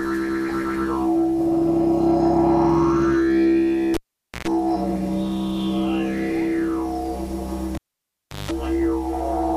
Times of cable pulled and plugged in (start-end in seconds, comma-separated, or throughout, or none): 3.94-4.48, 7.75-8.51